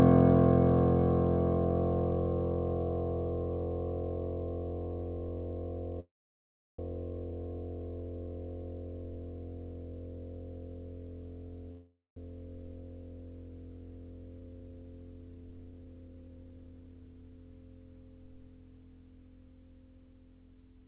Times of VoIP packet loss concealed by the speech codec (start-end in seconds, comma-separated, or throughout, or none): none